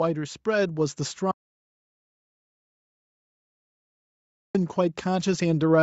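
From 1.31 to 4.55 s the speech drops out to total silence for about 3.2 s, with no room tone at all, unlike a noise gate's quieter floor, likely from a lost input. From 4.75 s to the end, automatic gain rises: speech and background noise swell together over about a second, which sets it apart from a level change in the speech alone.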